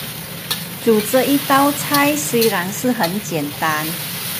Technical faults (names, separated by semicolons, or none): none